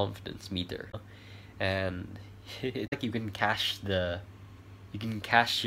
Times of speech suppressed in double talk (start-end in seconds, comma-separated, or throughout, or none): none